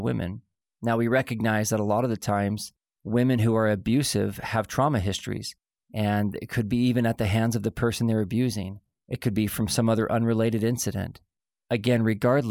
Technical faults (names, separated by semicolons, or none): none